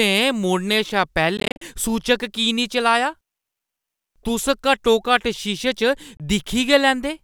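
A speech clip with Bluetooth dropouts. From 1.37 to 1.62 s, before "सूचक की नेईं", short silences chop the sound, gaps up to 40 ms. Another hole falls at 6.17–6.20 s. Dropped wireless packets are the likely cause.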